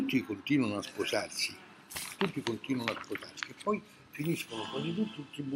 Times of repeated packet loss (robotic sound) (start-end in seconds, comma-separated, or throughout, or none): none